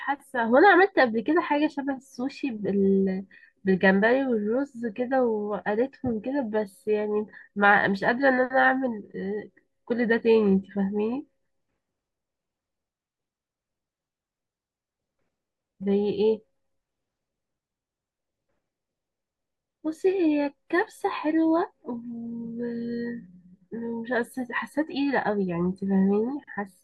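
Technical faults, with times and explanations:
No technical faults are audible anywhere in this speech recording.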